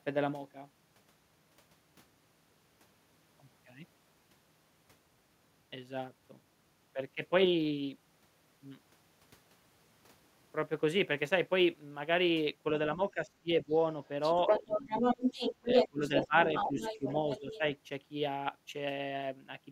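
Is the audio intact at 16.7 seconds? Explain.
No. From 16.45 to 17.59 s the other side's voice leaks through. A second voice sits only a few dB below the talker. The likely cause is an echo canceller leaving loudspeaker sound in the microphone signal.

Speech is also suppressed in double talk from 16.68 to 16.8 s. For about a tenth of a second, the talker's level dips by a few dB. The canceller likely mistook the talker for echo while both sides spoke, and turned everything down.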